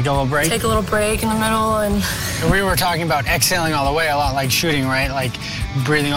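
No technical fault can be heard anywhere in the recording. Nothing in the sound calls for a timestamp or a cause.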